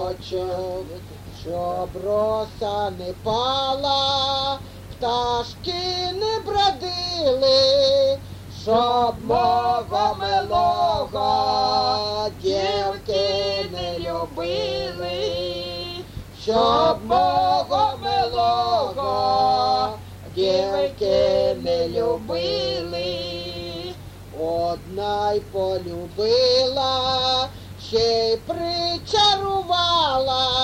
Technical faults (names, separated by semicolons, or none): none